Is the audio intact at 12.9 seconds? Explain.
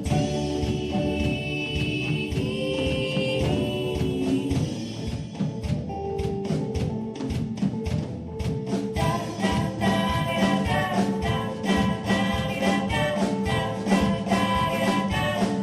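No. At 12.9 seconds, as throughout the clip, there is audible MP2 compression damage. The sound is dull and carries a gurgling, granular distortion, likely from MPEG Layer II coding at a bitrate around 80 kbps that starves its sub-bands of bits, silencing upper bands and coarsely quantising the rest.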